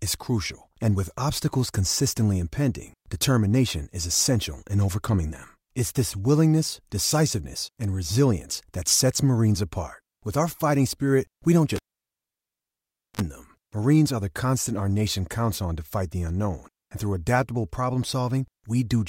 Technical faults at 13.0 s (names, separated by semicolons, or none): cable pulled and plugged in